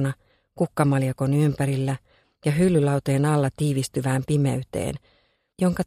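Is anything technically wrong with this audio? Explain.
No, the signal shows no technical faults anywhere in the clip.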